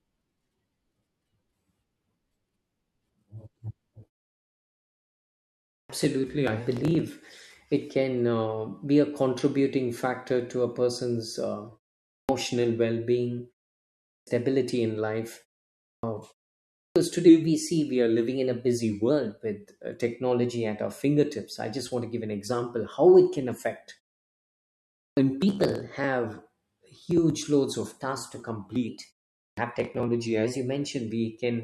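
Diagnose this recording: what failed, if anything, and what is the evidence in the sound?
Playback output shows a clipped start after a pause. Speech resumes abruptly at 5.72, 12.11, 14.09, 15.88, 16.8, 24.99 and 29.41 s, including "well being" and "in life". Each onset loses 150 to 180 ms. The device sleeps in gaps as short as 0.37 s and wakes late.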